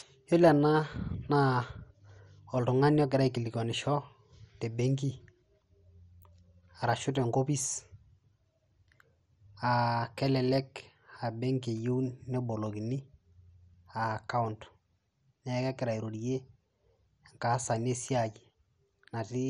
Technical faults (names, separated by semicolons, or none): MP2 compression